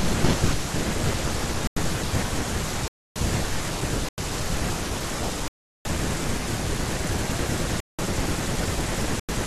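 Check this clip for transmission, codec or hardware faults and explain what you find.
The speech is interrupted six times by blocks of digital silence: at 1.67 s for 0.09 s, 2.88 s for 0.28 s, 4.09 s for 0.09 s, 5.48 s for 0.37 s, 7.80 s for 0.19 s and 9.20 s for 0.09 s. Every length is a whole multiple of about 93 ms, which fits output blocks of 4096 samples going unfilled in time and being played as zeros. Each hole starts and ends abruptly.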